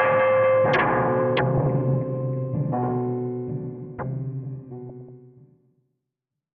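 At 1.55 s to 1.66 s the sound breaks into DAB burbling. Weak reception lets bit errors, around 0.15 percent, slip past the error correction. Corrupted samples put short blips of noise in single sub-bands, and corrupted scale factors make sub-bands leap in level for up to a frame. It sounds like a brief burst of blips over the audio. A longer burst returns from 4.89 s to 5.34 s, with many more damaged frames.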